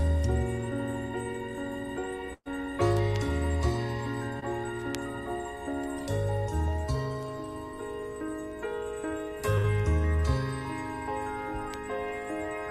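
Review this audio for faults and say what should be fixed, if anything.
At 2.33 to 2.48 s and 9.58 to 9.66 s, held, fading filler replaces missing audio, with a 50 ms silence in the first: bursts of packet loss, 120 and 60 ms dropped.

At 4.40 s, a brief smear where 20 ms of short concealed packet loss was patched by extending the preceding sound before blending back.

Prevent both with a larger jitter buffer, forward error correction and a more reliable network path.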